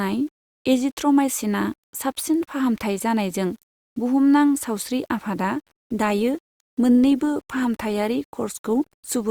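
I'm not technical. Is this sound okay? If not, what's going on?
No. Two things are wrong with this speech recording.

Throughout the clip there is a grainy, rough edge on the voice, especially in the quieter moments, where it turns gritty or sputters. This is likely low bit depth without dither: the sound was stored with too few steps of loudness, which fits an 8-bit signal. Unlike ordinary background hiss, this roughness rises and falls with the voice itself and isn't a steady layer underneath it.

From 5.61 seconds, right after "सावस्रि आफादआ", to the end at about 9.31 seconds, the speech suddenly sounds noticeably lower in quality, more processed and less clear. This is an adaptive stream at a lower bitrate. The streaming connection switched to a smaller, more compressed version of the audio to keep playing. It differs from a dropout because nothing goes silent or skips. The quality simply steps down at one instant and stays down.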